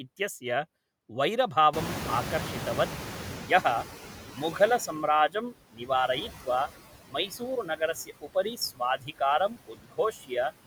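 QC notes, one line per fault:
Throughout: noise suppressor artifacts. The suppressor pulls steady noise down by about 12 dB per frame, so leftover background pumps around the speech.
1.73 to 4.9 s: noise suppressor catching up. Room noise jumps near 1.5 s. The suppressor's estimate needs about 3.2 s, so noise leaks through before sinking.
5.29 to 5.9 s, 6.28 to 6.47 s, 7.04 to 10.52 s: speech cut by the noise suppressor. The suppressor mistakes speech for noise, dropping it by up to about 18 dB. Parts sound swallowed and faint, briefly early, then for about 1.5 s in the last stretch.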